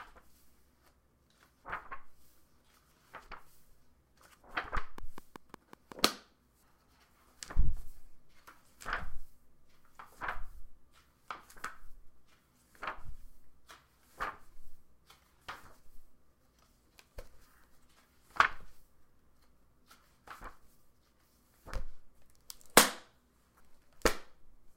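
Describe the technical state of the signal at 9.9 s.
At 9.9 s the sound is intact, with no dropout, distortion, glitch or other fault in the signal.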